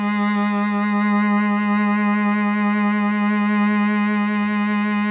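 Listening through this music, nothing stood out as a technical fault at any point.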